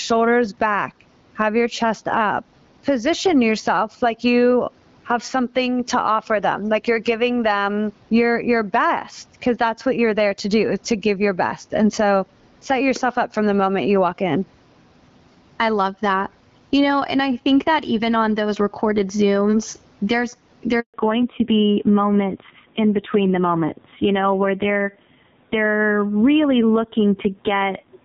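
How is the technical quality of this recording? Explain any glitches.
The speech has three technical faults: level pumping throughout, a brief dropout, and a lasting loss of high-frequency detail afterwards.

Throughout, the gain is pulled down on louder syllables, swinging by about 15 dB, so loud and soft parts sit closer in level and the sound is squashed. This gain pumping is likely from excessive gain driving a fast limiter.

At 20.80 s the speech dies away and stays silent for 140 ms until 20.94 s. It sounds like a handover gap, where no speech arrived while the call switched networks.

From 20.94 s to the end, everything above 4 kHz disappears, and the speech turns duller and rougher. This fits a fallback to narrowband, from HD Voice to a low-rate older codec.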